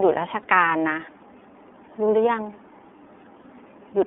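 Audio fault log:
Throughout: iLBC codec. The speech has been squeezed through a narrowband VoIP codec. It sits in a telephone band of roughly 250 Hz to 3.5 kHz, so there's no air or sparkle up top and not much weight underneath. The coding damage is plainly audible, with a rough, slightly synthetic edge. Each 30 ms frame is coded on its own at about 13.33 kbps, which fits iLBC's 30 ms mode.
0.42 s and 3.42 s: lost iLBC frames. At each point a single 30 ms frame drops out, and the decoder papers over it by repeating the last pitch cycle blended with a bit of noise. That gives a brief held, faintly buzzy or breathy vowel-like smear instead of silence. Since every iLBC frame decodes without needing the one before, the speech snaps straight back once the next frame arrives.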